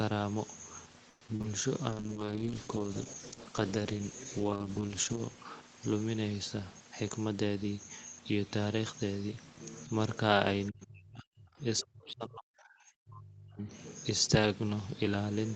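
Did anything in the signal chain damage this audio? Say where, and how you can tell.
Yes. Repeated packet loss (robotic sound) hits the network stage from 1.09 to 1.46 s. Four holes open in under 0.4 s, the longest 120 ms, and about half that span is concealment, where the receiver extends the last good sound to cover what never arrived. 140 ms of the original signal is simply gone, so the passage sounds choppy.

A jitter buffer slow-down follows at 1.78 to 2.26 s. Having just run short, the receiver rebuilt its reserve by repeating pitch periods over and over. That stretched the passage by 78 ms and ran it at 85% speed. The pitch holds steady while sounds drag out, which is the telltale sign of time-stretching rather than a slower source.

A call bitrate drop at the codec stage lasts from 1.9 to 5.4 s. The Opus encoder fell from 32 to 9 kbps and stayed at the floor for about 3.25 s. With so few bits the coding turns coarse, and the audio goes rough and watery, losing its top end. 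The normal 8 kHz band limit of this call path returns once the rate recovers.

A jitter buffer speed-up runs from 6.96 to 7.85 s. Too much audio had piled up in the buffer, so the receiver cut out short slices of one or a few pitch periods, removing roughly 150 ms in all. Playback runs at 113% of normal rate with unchanged pitch, and the passage sounds hurried.

Speech suppressed in double talk shows up in call processing at 10.70 to 11.62 s and again at 11.81 to 13.69 s. The level repeatedly drops, at worst by roughly 40 dB, across about one second and then about two. The likely cause is an echo canceller that could not tell the talker from loudspeaker echo while both sides spoke, so it ducked everything.

The other side's voice leaking through appears briefly at 11.78 to 11.82 s, a faint scrap sitting roughly 25 dB below the main speech. It lands just as the second suppressed stretch begins, which points to residual echo that the canceller likely failed to remove from the microphone during the overlap.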